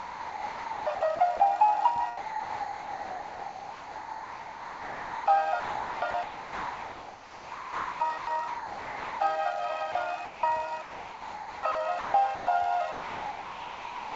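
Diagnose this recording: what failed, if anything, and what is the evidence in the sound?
Sound chopped by the voice detector, at the call-processing stage. From 0 to 1.4 s, 5.6 to 9.2 s and 10.8 to 12.47 s, the sound flickers between real audio and steady synthetic noise. The cause is likely a sender detector switching on and off repeatedly.

Sound dropped by the voice detector, at the same stage. Steady comfort noise replaces the sound at 2.17 to 5.26 s, 9.92 to 9.95 s, 10.25 to 10.43 s, and from 12.92 s to the end. The likely cause is the detector mistaking the sound for background. Everything sits below 8 kHz.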